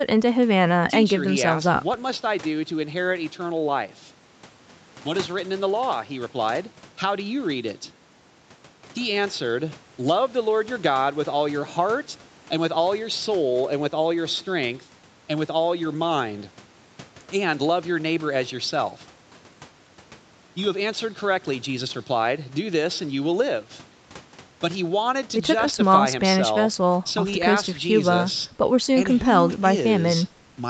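No technical fault can be heard in this speech recording. The sound stops at about 8 kHz, which fits a call microphone chain feeding a wideband Opus call path.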